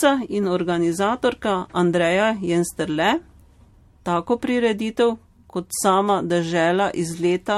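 Generation loss runs through the whole speech clip: swirly, smeared, hollow sound with blurred attacks and nothing above 16.5 kHz. It likely comes from about five MP3 passes near 65 to 68 kbit/s, each requantising on a shifted frame grid so noise and spectral holes accumulate.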